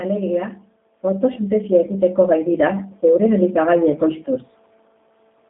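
From start to finish the speech has passed through a G.729 codec, which fits a low-rate 8 kbit/s VoIP link. Instead of carrying the waveform, the encoder sends a vocal tract filter, a pitch predictor and a few pulses per 10 ms frame, so the decoder rebuilds only an approximation. The result is plainly audible: the speech sounds rough and faintly synthetic, and the line is confined to roughly 200 Hz to 3.6 kHz, thin and boxy with no top end.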